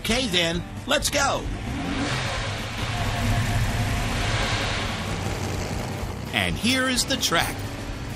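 For the first 2.0 s you're hearing an adaptive stream starting at a low bitrate. The player grabbed a cheap version to get going fast, and the sound bears that out: the top end is thin and partly synthetic, nothing above 12.3 kHz, with smeary codec artefacts, which fits something like a 16 kbit/s HE-AAC stream. At 2.0 s it jumps to a cleaner, fuller version, plausibly around 96 kbit/s AAC, with no gap at all.

Then from 2.78 s to 6.12 s there's a doubled audio track. A second full-band copy of the same audio trails the original by roughly a fifth of a second, at about the same level. It's dry, with no room or decay on it, and it cuts in and out abruptly at both ends, so it reads as a flat, stuttery echo. Most likely a slower second capture path got mixed in alongside the main one.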